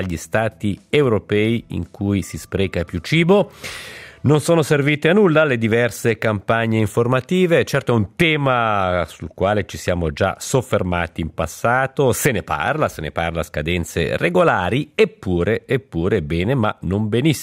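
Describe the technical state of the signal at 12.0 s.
At 12.0 s the signal runs cleanly, with no dropout, distortion, glitch or other fault audible at that point.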